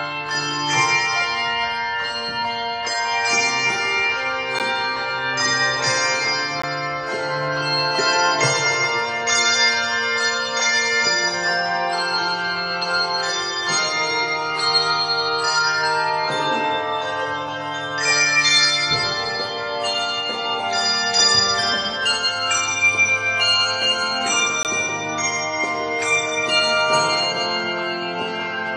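The sound drops out in three hard-edged silent holes at 4.59, 6.62 and 24.63 s, lasting about 13, 15 and 18 ms. That's a gap between stream segments: mismatched timestamps at boundaries that fit 2-second segments leave slivers the player fills with silence, though nothing's actually lost.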